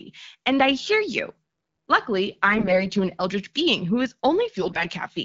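From 2.46 to 2.82 s, and again from 4.62 to 4.87 s, the speech turns hoarse, scratchy and gargly while keeping roughly its pitch and level. These are AMR bit errors on a wideband AMR-WB stream: around a tenth of the weakly protected bits in each frame arrived flipped, so the excitation pulses land in the wrong places and the fine pitch, gain and spectral values are thrown off.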